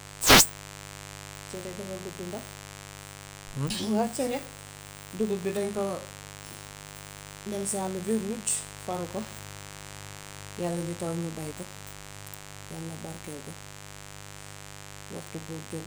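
From start to finish, a mains buzz rides under the speech. Interference from the 50 Hz supply has leaked into the signal path, entering as sharp spikes twice per cycle, so the result is a dense stack of 50 Hz harmonics climbing well into the kilohertz range rather than a clean hum. It sits only around 15 dB below the speech, loud enough to be heard as a constant, raspy buzz beneath every phrase and through the pauses.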